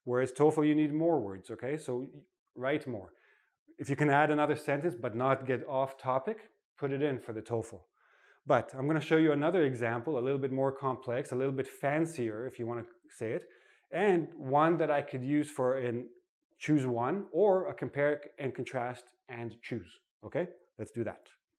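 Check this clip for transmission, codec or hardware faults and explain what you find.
Nothing audible points to a transmission, codec or hardware fault anywhere in the clip.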